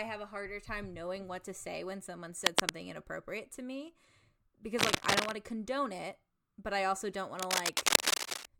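Cable scratch noise rasps over the speech from 2.44 to 2.72 s, about 10 dB above it, then from 4.78 to 5.32 s and 7.39 to 8.50 s, about 5 dB above. A worn, shifting connector is likely. Spectrograms show ragged broadband smears; waveforms, dense jagged spikes.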